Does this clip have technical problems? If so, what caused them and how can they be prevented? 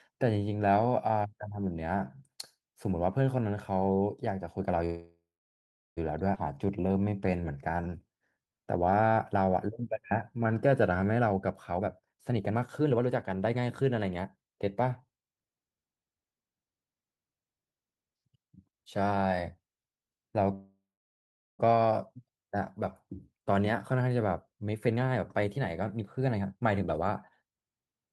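Yes, the clip has four kinds of timing fault.

Call audio freeze, at 4.85 to 5.99 s and 20.54 to 21.61 s. The likely cause is packets held up in transit until the jitter buffer ran dry. The receiver stretched the last sound into a fading buzz or hiss, then silence for about 0.74 s and 0.79 s. Speech resumes where it stopped, with a gap of about 1.1 s inserted and nothing lost. A more stable network path, with prioritised real-time traffic, prevents these stalls.

Skip ahead, at 6.35 s. Later audio was already queued while a stretch was dropped, so playback jumps forward with almost no join. Roughly 0.7 s of speech is missing. A jitter buffer that absorbs bursts without discarding queued packets prevents this.

Jitter buffer slow-down, from 6.54 to 11.12 s. The buffer was rebuilding its reserve, so the receiver repeated short pitch periods and bits of pauses. Speech runs at 89% speed with unchanged pitch and drawn-out sounds, adding 520 ms in total. 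Steadier packet arrival means the buffer seldom needs refilling.

Jitter buffer speed-up, from 11.19 to 14.71 s at 125% and from 24.72 to 28.08 s at 129%. The buffer held too much audio, so the receiver cut short pitch-period pieces. Roughly a second is removed in each stretch, and speech sounds hurried at the same pitch. Avoiding bunched packet delivery keeps the buffer near its target.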